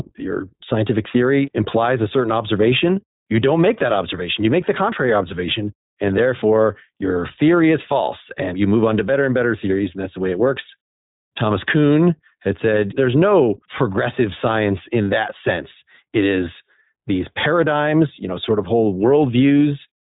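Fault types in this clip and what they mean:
iLBC codec: speech sounds noticeably rough and synthetic, with nothing above 3.8 kHz, which fits narrowband iLBC coding each 20 ms frame independently.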